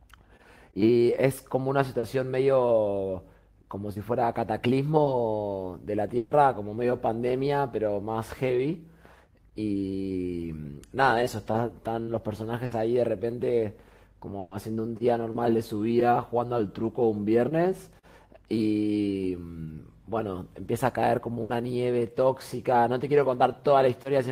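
Speech carried over a lossy network link, with two kinds of dropout. Short concealed packet loss appears at 1.99 to 2.05 s and at 5.03 to 5.07 s. About 40 ms and then 20 ms of audio never arrived in time. The decoder filled each hole by extending the last sound and then blended back into the real signal. Each one comes through as a brief smear or wobble. A quick consonant may drop out. Bursts of packet loss are longer. They fall at 6.17 to 6.33 s (140 ms), 12.65 to 12.73 s (60 ms), 14.39 to 14.53 s (120 ms) and 21.43 to 21.51 s (60 ms). Packets were lost or arrived too late to be played each time. The receiver kept the previous sound going and faded it, giving a held buzz or a dying hiss rather than silence. Speech then resumes further along, and the stretch in between is lost.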